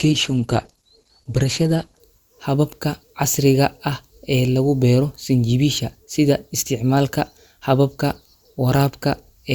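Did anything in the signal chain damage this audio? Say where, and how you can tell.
Yes. For the first 2.0 seconds the speech is dull and thin, with the treble missing or replaced by a synthetic fizz and coarse codec artefacts, and at 2.0 s it brightens abruptly with no gap in the audio. That is an adaptive stream starting at a low bitrate, a codec and network stage fault: the player began on a cheap rendition, consistent with Opus at around 16 kbit/s, then stepped up to roughly 64 kbit/s once it had measured the connection.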